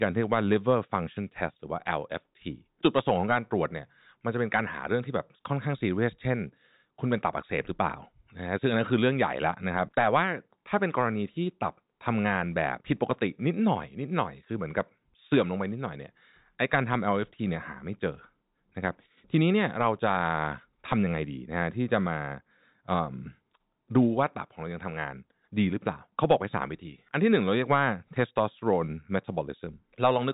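No technical faults heard.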